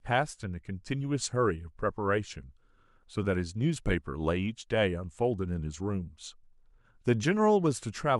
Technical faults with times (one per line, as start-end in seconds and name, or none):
none